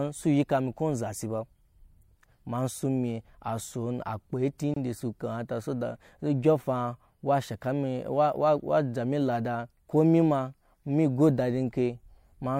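From 2.29 to 2.39 s the speech breaks into a gritty burst of processor overload crackle. Around ten consecutive audio buffers of about 10 ms each missed their deadline and were simply skipped. Unlike a single dropout, this is a rapid train of hard-edged holes that stops once the load eases.

At 4.74 to 4.76 s, just before "su kamata so dat", a 24 ms gap opens at a join of encoded pieces. Encoder start delay and end-of-frame padding were left in when the pieces were joined. What sets it apart from a skipped buffer is that this is one gap whose edges are smeared by the codec, after which the speech picks up exactly where it stopped, with nothing lost.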